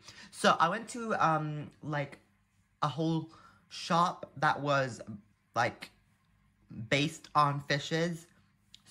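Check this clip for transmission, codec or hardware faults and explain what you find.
Nothing faulty turns up anywhere in this recording.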